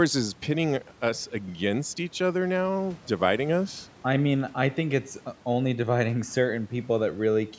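There are no technical faults to describe in this speech clip, at any point in time.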